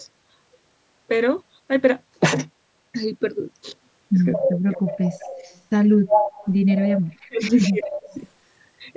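A speech recording in which a far-end echo canceller likely failed to fully remove its loudspeaker signal, so an echo leak sends back a copy delayed by 219 ms at 4.33–4.52, 4.73–5.61, 6.09–6.53, 6.69–7.02 and 7.55–8.16 s. It ranges from faint, about 15 dB down, to nearly as loud as the speech around 6.1 s. When both sides overlap, the canceller likely mistakes the talker for echo and applies speech suppressed in double talk. The voice dips by about 20 dB at 4.37–4.83 s, sinks roughly 40 dB, almost out, at 7.08–7.43 s, and drops about 25 dB at 7.69–8.16 s. Throughout, the call microphone chain passes nothing above 8 kHz.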